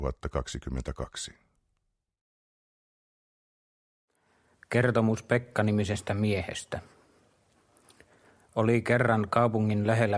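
No audible faults anywhere in the clip.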